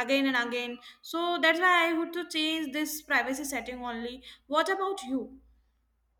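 No technical faults are audible anywhere in this speech recording.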